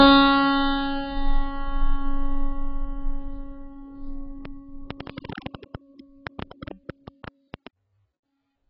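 A music clip carrying heavy AAC compression damage throughout, likely from AAC-LC at a very low bitrate, something that fits roughly 12 kbps. Nothing survives above 5.5 kHz, so the music sounds dull and smeared, with a warbling, fizzy texture. A spectrogram shows a hard ceiling at 5.5 kHz. From 4.45 to 7.68 s a train of clicks ticks over the music at about 9 per second, irregularly spaced, around thirty in all. The likely source is electrical interference or a faulty connection or power supply. The clicks peak about 10 dB above the music, and the waveform shows them as thin, similar spikes, while the spectrogram shows them as vertical broadband lines.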